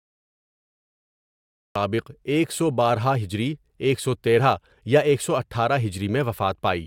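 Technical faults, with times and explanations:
0.00–1.76 s, cut-off start: the clip opens on dead digital silence, then the speech snaps in at 1.76 s already mid-sound, with no attack or fade-in, because capture began late and missed whatever was leading into that point.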